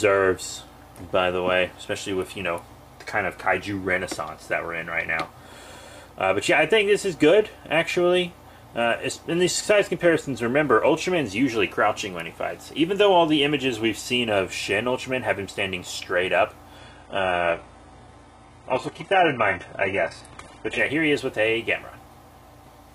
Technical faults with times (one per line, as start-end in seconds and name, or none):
16.78-20.78 adaptive stream at a lower bitrate